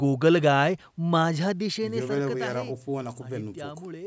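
No technical faults can be heard in this speech recording. It has passed through a call's microphone processing, which leaves nothing above 8 kHz and trims the lowest bass, and the level rises and falls smoothly as if set by a fader.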